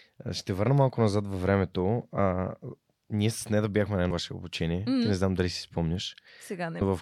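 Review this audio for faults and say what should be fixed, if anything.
Compressed frames skipped at 2.17 s (after "малко назад във времето"), 4.09 s (after "нея да бяхме на") and 6.81 s: the speech jumps ahead by about 150, 100 and 200 ms, fitting a codec with 24 ms frames. Prevent this by checking file integrity after transfer and re-encoding from an undamaged source.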